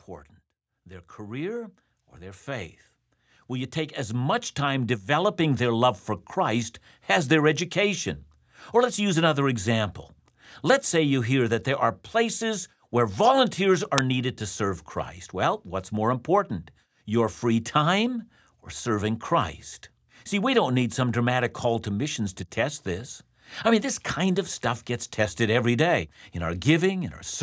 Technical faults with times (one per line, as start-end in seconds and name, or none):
0.87-5.37 automatic gain rising
13.98 uninitialised buffer